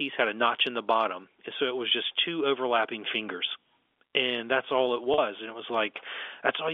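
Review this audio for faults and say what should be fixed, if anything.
Packet loss with pitch repetition occurs at 5.14 to 5.18 s, just after "that's all it". About 40 ms of audio went missing, which fits two lost 20 ms packets. The receiver filled the gap by repeating the last pitch period, so the sound briefly holds with a slightly buzzy, frozen quality before the real signal resumes. The narrow 300 to 3500 Hz telephone band of the G.711 line is audible throughout. To prevent this, use a larger jitter buffer or forward error correction.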